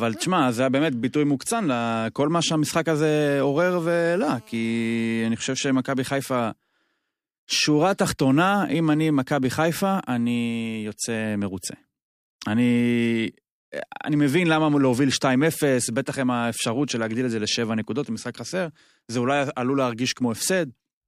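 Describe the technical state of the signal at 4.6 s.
At 4.6 s, GSM phone buzz runs from 3.64 to 5.04 s: a nearby 2G handset on a call bursts about 217 times a second, and the audio circuit rectifies those pulses into a steady, raspy buzz about 30 dB below the speech. A spectrogram shows a comb of harmonics spaced 217 Hz apart.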